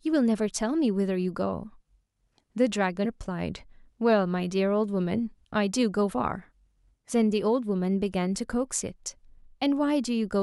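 At about 3.04 s the speech jumps forward. It's a case of compressed frames skipped: a short run of encoded frames was either missing or rejected by the decoder as damaged, so playback picked up further along. Roughly a tenth of a second of audio just isn't there, which fits around five frames of about 23 ms each.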